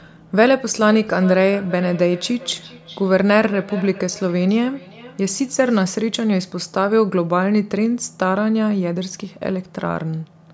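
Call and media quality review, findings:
Feedback echo between two devices, 0.9 s to 5.9 s. Speech repeats roughly every 0.4 s, thin and ringing, peaking about 18 dB below speech. Cause: second in-room device replays call into this mic. Local echo canceller cannot remove it.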